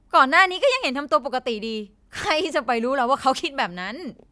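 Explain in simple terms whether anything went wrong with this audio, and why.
Nothing went wrong: the speech in the recording carries no audible technical fault at any point.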